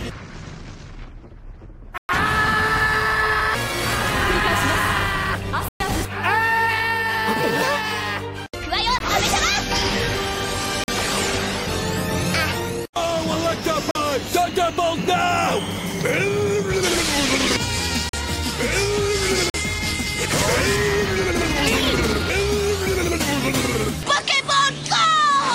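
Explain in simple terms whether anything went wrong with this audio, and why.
Something did go wrong: the sound keeps dropping out in blocks of digital silence, where the audio is briefly replaced by nothing and snaps back. The gaps come at 1.98 to 2.09 s and 5.68 to 5.80 s (each about 0.11 to 0.12 s long), a very short 18 ms gap at 8.99 s, and four identical 43 ms holes at 10.84, 13.91, 18.09 and 19.50 s. Those matching four fit a 2048-sample buffer the software didn't fill in time.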